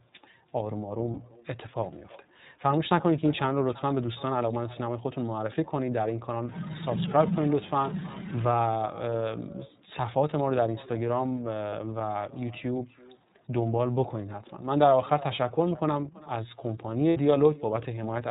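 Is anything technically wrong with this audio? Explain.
Yes. The speech carries three faults. Echo with no canceller runs throughout: the far end's loudspeaker feeds its microphone, and nothing removes it. So each phrase returns roughly a third of a second later, about 22 dB quieter and thinner. On a spectrogram every utterance has a faint, delayed ghost trailing it.

The iLBC codec also shapes the whole clip. Each frame's excitation is coded independently, which fits 30 ms frames, and the result is a rough, slightly synthetic texture with plainly audible damage. A spectrogram shows nothing above 4 kHz, a hard ceiling across the entire clip.

Lost iLBC frames occur at 1.14–1.18 s, 11.70–11.74 s and 17.10–17.17 s, the first two about 30 ms and the last about 60 ms. The decoder repeats the last pitch cycle with added noise, so each gap sounds like a brief held, buzzy vowel. The waveform shows short repeated periods, and clean speech resumes almost immediately afterward.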